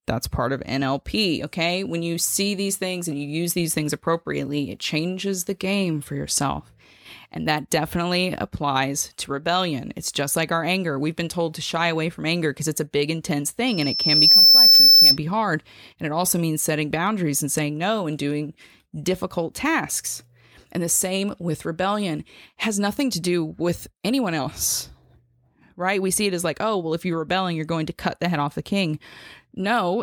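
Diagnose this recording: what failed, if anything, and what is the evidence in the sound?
Loudspeaker feedback squeal at the acoustic end of the analogue chain, from 13.67 to 15.18 s: a single 5.3 kHz tone swells in under a second to roughly 15 dB above the speech. The mic was hearing its own speaker, and loop gain topped unity at that frequency.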